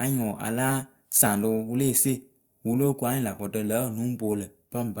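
There are no technical faults to describe in this speech recording.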